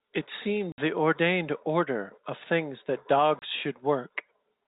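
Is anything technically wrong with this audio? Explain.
Yes. The speech has packet loss filled with silence. Holes appear at 0.72 s, lasting 60 ms, and at 3.39 s, lasting 30 ms. The gaps suggest 30 ms packets, two lost then one. The receiver played silence instead, so the speech cuts out abruptly with hard edges. The narrow telephone band of G.711 coding stays audible throughout.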